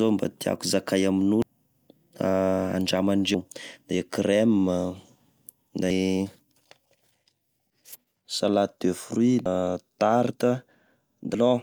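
Five short blips break into the speech at 1.42–1.47, 3.34–3.38, 5.90–5.94, 9.46–9.49 and 11.34–11.38 s, each a short glitch of 32 to 42 ms. That's damaged data in a compressed stream: the decoder hits corrupted frames, loses sync and hunts for the next valid header.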